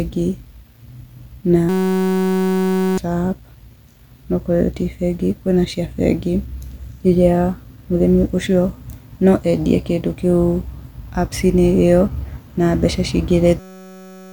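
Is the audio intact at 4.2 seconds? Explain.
Yes, the audio is intact at 4.2 seconds, with no fault there.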